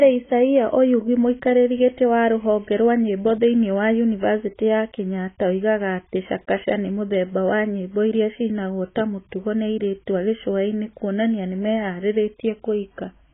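AAC compression damage runs throughout this speech clip: nothing survives above about 3.8 kHz, so the sound is dull, and sibilants and sustained vowels take on a smeared, warbling, fizzy texture. The likely cause is heavy AAC-LC coding at a very low rate, one that fits roughly 16 kbps, where the encoder drops the top band and quantises the remaining frequency lines so coarsely that holes and substitute noise appear.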